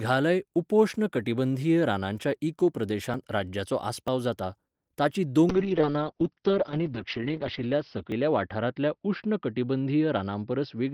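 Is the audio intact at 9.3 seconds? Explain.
No: a call bitrate drop from 5.51 s onward, after "जाता ताचीं", cuts coding from 32 to 7 kbps, muffling the speech; the spectrogram shows everything above 6 kHz gone.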